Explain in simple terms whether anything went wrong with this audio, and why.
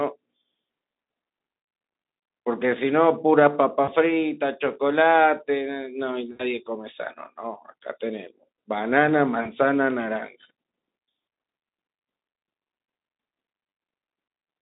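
Four short hiccups interrupt the speech, at 3.83, 6.31, 9.41 and 13.69 s. That's VoIP packet loss concealed by the speech codec: bits of the call went missing, so the Speex decoder filled each gap by stretching the last sound into a brief, fading buzz.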